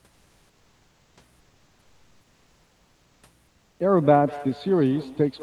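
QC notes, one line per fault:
0.11–1.15 s, 1.39–3.23 s, 3.47–3.79 s: comfort noise in place of the background. Transmission likely paused during silence; synthetic noise replaced the real background, steadier, featureless, about 1 to 3 dB quieter.
3.99 s to end: feedback echo between two devices. A second device replays the call into the microphone, so speech returns roughly every fifth of a second, peaking about 19 dB below speech.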